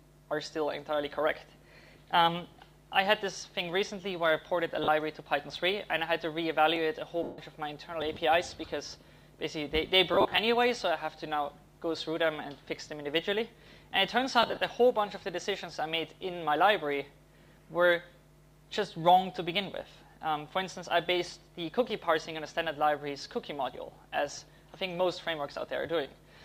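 At 4.84 s there's a 40 ms patch of lost LE Audio frames. The LC3 decoder keeps replaying the last spectrum with scrambled signs, so tones go to a noisy smear. A tiny block of digital silence at 6.76 s drops the output to silence for 0.6 ms and back with no fade, so you hear a tick. The longest loss runs from 7.23 to 7.38 s, 150 ms, and you can hear the smear fade away toward silence. Another tick at 8.02 s is a 0.69 ms silent gap. From 10.14 to 10.38 s about 140 ms of losses are scattered in short bursts, the longest around 40 ms, and 14.43 to 14.61 s does the same with 120 ms lost. Last, at 21.90 s a 1.33 ms, 64-sample dropout ticks, which fits the buffer not getting filled in time.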